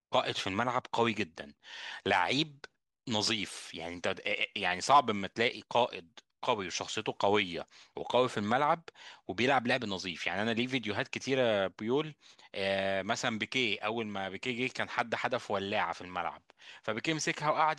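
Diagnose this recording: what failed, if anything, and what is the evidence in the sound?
Nothing in the chain failed. The speech signal is intact and continuous, with no audible sign of trouble at any stage from capture through to playback.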